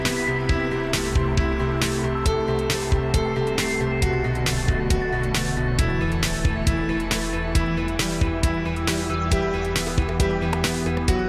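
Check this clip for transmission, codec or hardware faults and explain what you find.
I found no faults to report in this clip.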